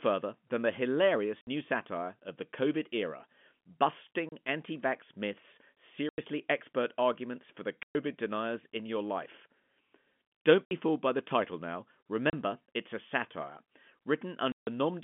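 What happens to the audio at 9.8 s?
Nothing goes wrong at 9.8 s: the speech carries on intact through that moment, with only the narrow telephone band of G.711 coding that runs through the whole clip.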